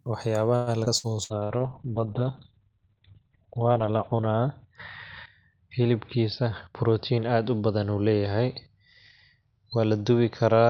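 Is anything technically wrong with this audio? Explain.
Yes, there are four faults, and three of them cluster early in the clip, with one of those carrying through to the end.

Repeated packet loss (robotic sound) runs from 0.55 to 1.62 s. The speech turns choppy and metallic, with pieces missing. There are four separate holes, the longest 115 ms, and roughly 30% of that stretch is filled in rather than real. Packets kept failing to arrive in time. Each gap was papered over by extending the last bit of sound, and the next gap followed before the voice could settle.

A skip ahead sits inside that stretch, from 0.85 to 0.89 s. The audio jumps forward with almost no gap, losing a short fragment of speech, well under a tenth of a second. That chunk was dropped while later audio was already queued. That cut the playback delay by around 50 ms, and the two sides of the cut are joined almost directly.

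A call bitrate drop begins at 1.24 s and lasts to the end. The speech becomes muffled, rough and watery, and everything above 4 kHz is gone, down from a full 20 kHz band. The character fits the encoder being pushed from about 48 kbps down to 7 kbps after the bandwidth estimate fell. At the lowest setting, which holds for about 3 s, the coarse coding and narrow band are at their worst.

A jitter buffer speed-up runs from 6.44 to 7.40 s. The speech sounds hurried, about 10% faster, but the pitch stays the same. The buffer was holding more audio than it wanted. To shrink the delay, it removed many tiny pitch-period-length slices in quick succession, around a tenth of a second in total, which compresses the timing without shifting the pitch.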